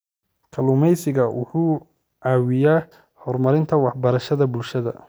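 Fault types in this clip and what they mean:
No fault types can be heard in this clip.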